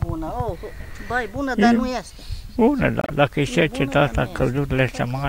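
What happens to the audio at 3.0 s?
Damaged data in the compressed stream from 3.01 to 3.10 s makes the decoder misread frames and resync, causing a chirp, squawk, click or short hole.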